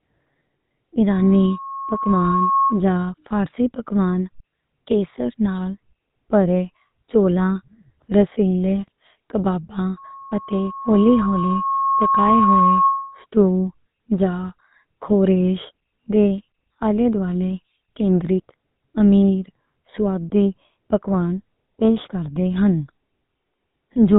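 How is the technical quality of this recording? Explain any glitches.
The recording is degraded throughout by codec damage and twice by feedback.

GSM full-rate codec, whole clip: band-limited below 4 kHz, with buzzy, gravelly speech from pulse-excited vocal-tract modelling, which fits 13 kbps GSM.

Loudspeaker feedback squeal, 1.10–2.84 s and 9.97–13.26 s: the mic-speaker loop exceeds unity gain at 1.1 kHz, and a tone swells over roughly one and a half to two seconds, reaching speech level, then louder.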